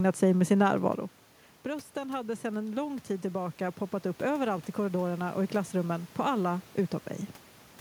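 Automatic gain rising runs from 1.63 to 6.73 s, just after "sig med sin närvaro". The input fell by about 12 dB as the talker moved back around 1 s, and the gain control slowly added about 7 dB, so voice and room noise swell together.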